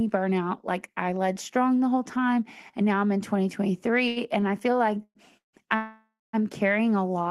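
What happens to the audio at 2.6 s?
Nothing goes wrong at 2.6 s: the speech carries on intact through that moment, with no dropout, click or distortion.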